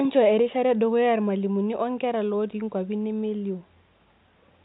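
From start to finish the speech sounds dull and gurgly, with a grainy edge, likely MP2 compression at a low rate near 64 kbps, starving upper sub-bands of bits.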